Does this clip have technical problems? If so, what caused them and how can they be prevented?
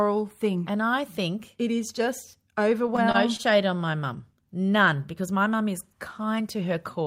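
Yes. Repeated stalls (stutter) from 2.87 to 3.41 s, after "think it is just": late packets drained the jitter buffer four times, and the receiver stretched the last sound, each gap 28 ms or less. A larger adaptive jitter buffer and a steadier network path would prevent it.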